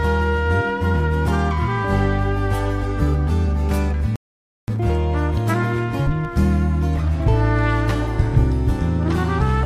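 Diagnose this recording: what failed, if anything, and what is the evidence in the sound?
Playback stage: a playback stall, with silence from 4.16 to 4.68 s mid-flow, likely the player running dry of data or its thread being blocked.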